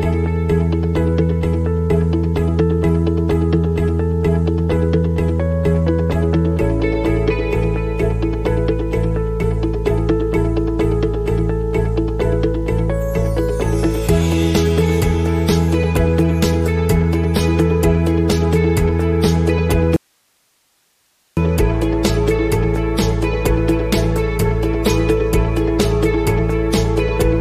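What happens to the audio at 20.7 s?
An audio dropout to a faint residue runs from 19.96 to 21.37 s, covering 20.7 s. The wanted signal cuts out abruptly for about 1.4 s, likely from a break upstream while the later path stayed live, leaving only hiss roughly 45 dB below normal level.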